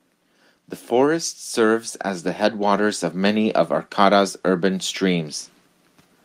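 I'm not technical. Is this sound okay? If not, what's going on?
No. From 1.14 to 3.65 s, automatic gain rising: the recorder slowly turns itself up, so the voice and the background noise grow louder together, unlike a speaker moving closer.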